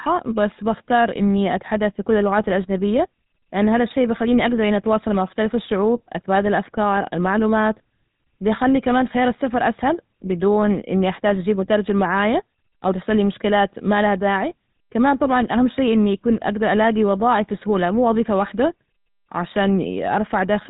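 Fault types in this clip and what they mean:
GSM full-rate codec: speech rebuilt from a vocal-tract model driven by sparse pulses, giving plainly audible buzzy, gravelly roughness and nothing above 4 kHz, unlike mere band-limiting, which stays smooth.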